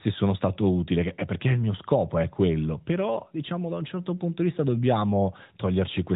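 No faults found: the speech carries only the expected character of the AMR narrowband mobile codec path, with nothing above 4 kHz.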